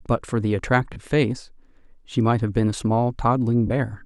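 At 0.93 s and again at 3.67 s, the speech briefly smears into a noisy wash for about 30 ms. These are lost LE Audio frames: the LC3 decoder covered each gap, which fits three missing 10 ms frames, by replaying the last spectrum with randomised signs.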